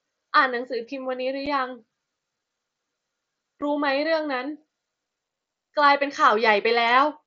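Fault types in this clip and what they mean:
Unconcealed Bluetooth headset packet loss: a voice packet between headset and phone went missing and nothing filled the gap, so there's a 7.5 ms hole with abrupt edges at 1.46 s and again at 3.61 s, each fitting a single lost packet on the mSBC link.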